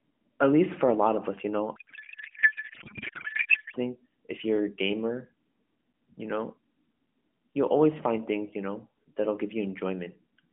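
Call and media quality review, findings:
Codec payload misread, 1.76 to 3.76 s, between "lot of us you" and "if you're a gamer": octet-aligned AMR frames parsed as bandwidth-efficient, so the decoder pulls its parameters from the wrong bit positions. Speech is replaced by garbled warble that barely tracks the talker. Normal speech returns once the parsing realigns. Surrounding AMR narrowband mobile codec path: band limited to roughly 200 Hz to 3.4 kHz, with light coding roughness that fits the 12.2 kbps mode.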